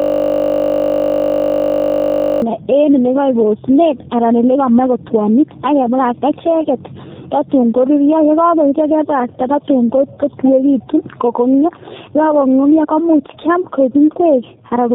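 A system hang loop is already under way when the clip starts and runs to 2.42 s. The playback side froze while the sound hardware kept cycling one 20 ms block of audio, repeating it about 120 times, so it comes through as a steady buzz at 50 Hz.

Tandem speech coding runs throughout the speech. It passed through two low-rate speech codecs in a row, consistent with AMR-NB and then G.729A with a G.711 link between them. The second coder reworked the first one's already damaged output, so the voice sounds rough and warbly. Nothing remains above 3.7 kHz, which makes it muffled.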